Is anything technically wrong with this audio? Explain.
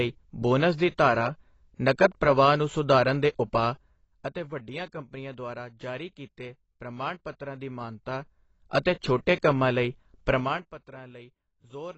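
Yes. AAC compression runs through the whole speech clip. The sound is dull and smeared, with nothing above 8 kHz and a warbling, fizzy texture on sibilants and held sounds that is plainly audible. This likely comes from AAC-LC coding at a low bitrate, fitting roughly 24 kbps. The encoder quantises each frame's frequency lines coarsely against a hearing model, discarding the top band and leaving gaps that smear and shimmer.

Zipper noise appears from 7.46 to 9.02 s, while the level moves by roughly 15 dB. The gain changes in 2 dB steps at about four per second, with no smoothing between them. Each jump breaks the waveform with a small click, so a regular ticking rides on the speech until the change finishes.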